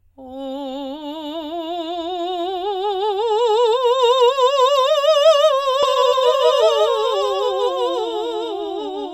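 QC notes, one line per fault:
5.83 s to end: doubled audio track. A second, full-band copy of the music cuts in abruptly and runs about one and a half seconds behind, roughly 5 dB quieter, with no decay or room colour. This likely comes from a slower second capture path.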